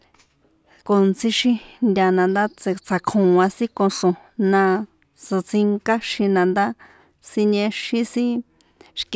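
A speech recording with no audible technical faults anywhere in it.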